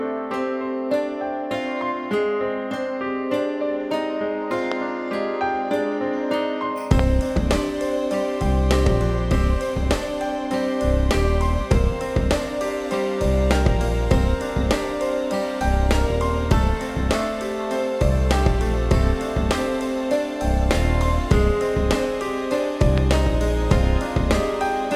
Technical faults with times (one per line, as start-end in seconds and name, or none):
4.72-4.74 loud pop
6.99-7.01 loud pop
22.98-23.00 loud pop